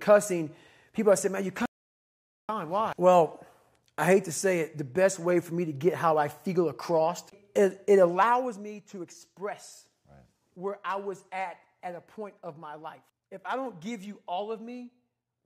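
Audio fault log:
1.66 to 2.49 s, audio dropout to silence: the sound cuts off and returns abruptly after about 0.83 s of silence with no room tone, likely from a lost input while recording continued. Unlike a fade or pause, there's no ramp and no background.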